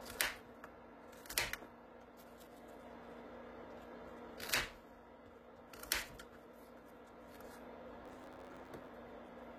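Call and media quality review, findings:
Call and media quality review, findings:

Gritty, metallic treble throughout; likely HE-AAC compression near 20 kbps. Replicated upper bands, unlike plain lowpass dullness, keep brightness but sound synthetic.

8.02–8.88 s: 91.9 Hz buzz, audio 1.07x faster at unchanged timbre; block size mismatch (truncated), block tails discarded, fits 512-sample writes. Unlike resampling, timbre holds.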